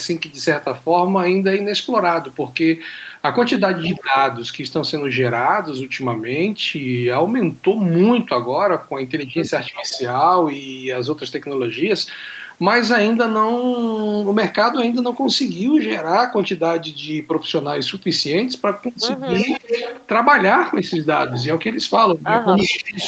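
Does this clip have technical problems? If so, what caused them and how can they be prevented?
Yes. Echo leak: the far end's echo canceller likely let loudspeaker pickup through, so a copy delayed about 308 ms appears at 3.83–4.03 s and 9.73–9.97 s, quiet there, then nearly as loud as the speech from 19.33 s to the end. Using a headset or tuning the far end's echo canceller would prevent this.

Speech suppressed in double talk: with both sides talking, the echo canceller likely turned the talker down too, so the speech dips at 3.89–4.15, 9.71–10.0, 19.45–19.73 and 22.58–23.02 s, deepest in the last. A double-talk detector that keeps near-end speech during overlap would avoid these dips.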